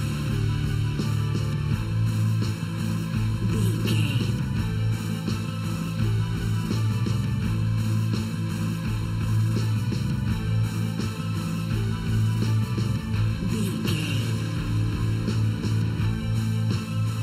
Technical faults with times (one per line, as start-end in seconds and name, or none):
0.00-17.23 channel delay (comb filtering)